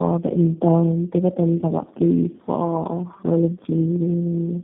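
Speech, marred throughout by tandem speech coding. It sounds rough, muffled and warbly, with nothing above 3.6 kHz. That points to three G.729A encodings in a row, each degrading the last.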